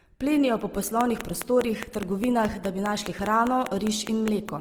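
From the start to the end of the speech, Opus compression is plainly audible. The speech sounds grainy and rough rather than swirling or watery, which sets it apart from MP3-style damage. The encoder keeps the energy in every band and fills starved bands with folded or noise-like content. The bandwidth stays full, reaching up to 20.4 kHz, so the muffled sound of Opus's speech mode is absent. The amount of grain points to a low bitrate of around 16 kbps.

From 1.01 s to 4.50 s, a train of clicks ticks over the speech at a steady 4.89 per second, about twenty in all. The peaks stand roughly 15 dB above the speech. Each click has much the same shape, and the spacing is regular, like a metronome. Crackle or dropouts would instead give random, varied pops. The evenness suggests a periodic pulse, likely interference from nearby equipment or a faulty connection or power supply.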